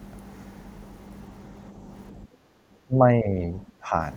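Background gated by the echo canceller, from 2.24 to 2.58 s in this speech recording: while the far-end loudspeaker is active, the canceller clamps the microphone, so the room sound falls by about 16 dB for roughly a third of a second before recovering. Speech suppressed in double talk follows from 2.86 to 3.94 s, where the talker's level sinks by around 20 dB. The likely cause is the canceller mistaking near-end speech for loudspeaker echo during simultaneous talk and attenuating both.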